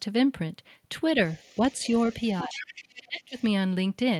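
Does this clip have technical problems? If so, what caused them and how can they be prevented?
Yes. The other side's voice leaks through from 1.28 to 2.99 s, sitting roughly 15 dB below the talker's speech. A fainter scrap returns from 3.21 to 3.46 s, around 30 dB down. The likely cause is the far end playing on the talker's loudspeaker, reaching the microphone, and not being fully removed by the echo canceller. Using a headset, or giving the canceller a cleaner reference and better tuning, would prevent this.

Speech is also suppressed in double talk. From 2.44 to 2.63 s, about 200 ms, the talker's voice dips by roughly 15 dB. From 2.97 to 3.37 s, about 400 ms, it drops much deeper, by around 35 dB, and nearly vanishes. Both dips overlap the leaked far-end voice. This points to the echo canceller likely mistaking the talker for echo while both sides spoke and turning everything down. A headset or a canceller with better double-talk detection would prevent it.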